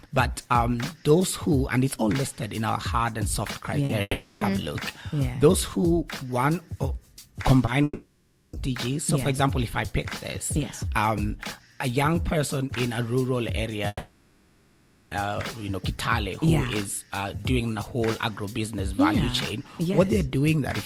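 Short concealed packet loss at 3.85 s: about 40 ms of audio arrived too late, and the receiver bridged the gap by extending the preceding sound before blending back, heard as a brief smear or wobble.

Long network dropout at 4.01 to 4.43 s: the stream was likely cut for 0.4 s. The last sound stretches into a fading buzz or hiss, a short silence follows, and the audio resumes with that stretch missing.

Short concealed packet loss at 7.65 s repeats the effect over about 20 ms.

Long network dropouts at 7.83 to 8.55 s and 13.87 to 15.13 s behave the same way, losing 0.7 s and 1.24 s of audio.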